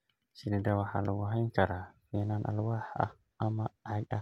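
No technical faults turn up anywhere in the speech, so there is nothing to describe in time order.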